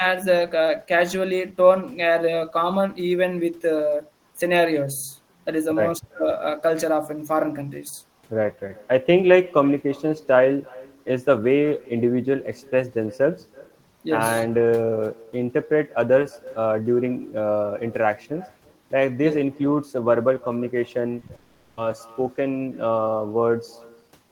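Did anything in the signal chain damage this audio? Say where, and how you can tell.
Yes. Call processing: echo with no canceller runs the whole clip. A faint, thin copy of the speech trails it by roughly 300 ms, about 25 dB down. That is the far-end loudspeaker leaking into its microphone with nothing subtracting it.

Network, short concealed packet loss: two brief smears at 21.19 to 21.23 s and 21.27 to 21.31 s. Each covers about 20 ms that the decoder filled by extending the previous sound before blending back into real audio.

Network: from 21.35 to 21.79 s the speech gives way to a continued buzz or hiss that fades, then resumes further on with that stretch missing. About 420 ms went unplayed. A long network dropout is the likely cause.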